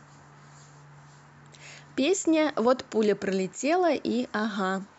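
No technical faults can be heard anywhere in the speech.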